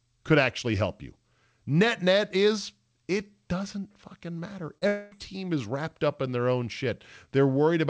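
At 4.78 to 4.83 s, after "doesn't fucking matter", short concealed packet loss leaves a brief smear where about 34 ms of speech was synthesised from the preceding sound. From 4.87 to 5.13 s, a fading buzz or hiss replaces about 240 ms of missing audio, likely a long network dropout, before speech resumes at "team is wrapped up", above a band that stops at 8 kHz.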